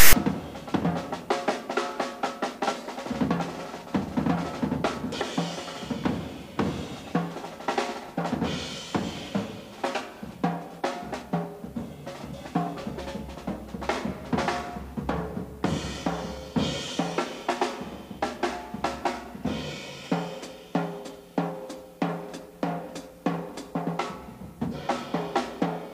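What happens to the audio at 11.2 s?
Nothing goes wrong at 11.2 s: the audio plays through that moment intact, with no dropout, click, distortion or other fault.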